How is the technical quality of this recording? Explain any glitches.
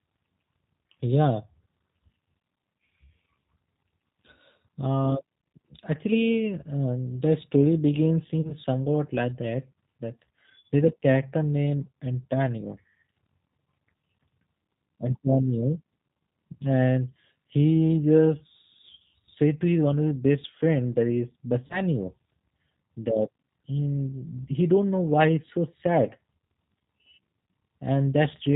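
The speech throughout sounds band-limited, slightly rough and synthetic, with two short glitches. This is the G.729 codec at 8 kbit/s, which rebuilds speech from a filter and sparse pulses and cuts everything above 4 kHz.

From 8.42 to 8.53 s, after "um the story begins" and before "somewhat like that", and again from 21.67 to 21.81 s, after "best friend that is", the speech briefly smears into a buzzy tone or coloured noise that fades. This is VoIP packet loss concealed by the speech codec: about 30 ms of audio went missing, which fits a single lost packet. The decoder filled the gap by extending its last pitch and filter at falling gain, and the speech took a little longer to recover.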